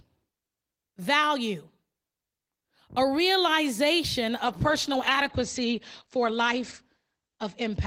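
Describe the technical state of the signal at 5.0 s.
The call's bandwidth estimate has fallen, forcing a call bitrate drop from 32 to 11 kbps that runs from 4.46 s, just after "a realization", to 7.86 s. Coarser coding and a cut-off lowered from 20 kHz to 8 kHz leave the speech rough and muffled.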